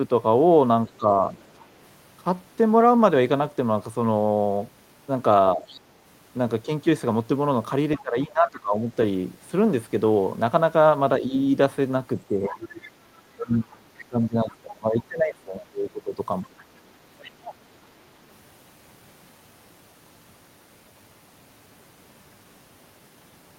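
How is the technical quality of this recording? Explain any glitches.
The recording has two related echo-control faults, both around moments when two people are talking at once.

Other side's voice leaking through at 0.87 to 1.66 s, 5.67 to 8.0 s and 12.63 to 17.54 s: a second voice sits under the talker, faint at first and rising to roughly 20 dB down by the last stretch. The likely cause is a loudspeaker echo that the canceller only partly removed. On a spectrogram it would appear as faint harmonic traces overlapping the main ones.

Speech suppressed in double talk at 0.97 to 1.23 s, with a dip of about 10 dB, and across 5.55 to 16.54 s, with drops of up to about 20 dB totalling roughly four seconds: the talker's voice dips. The canceller likely turned everything down because it could not separate the two voices. The waveform would show sudden notches in the envelope.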